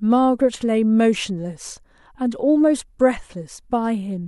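Speech recording, with no technical faults detected anywhere in the audio.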